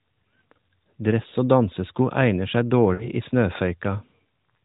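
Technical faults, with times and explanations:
1.30–1.34 s, lost AMR speech frame: a brief dip or warble, consistent with one missing 20 ms frame that the decoder bridged by repeating its last good pitch and vocal tract settings at reduced gain.
2.94–3.09 s, lost AMR speech frames: the sound drags out and fades toward silence, then returns weak. This fits three consecutive 20 ms frames concealed with falling gain.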